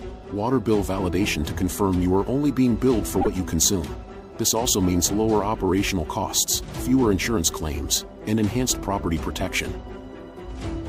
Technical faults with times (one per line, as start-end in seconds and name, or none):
3.18-3.27 damaged data in a compressed stream
5.43-9.53 periodic USB or driver dropouts